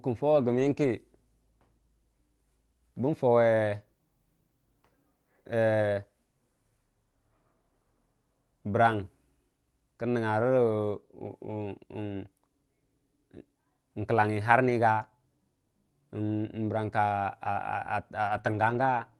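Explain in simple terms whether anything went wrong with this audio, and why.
Parts of this speech were lost on the network, producing a lost packet rebuilt from error correction at 0.31–0.89, 8.91–8.93, 10.41–10.43, 14.65–14.71, 17.45–17.47, 18.25–18.39 and 18.45–18.99 s. Each following packet carried a rough backup copy, so there's no gap, but those moments sound grainier and noisier.

At 18.41–18.45 s, a short concealed packet loss: about 20 ms arrived too late, so the receiver stretched the preceding sound to cover it, heard as a brief smear or wobble just between two rebuilt stretches.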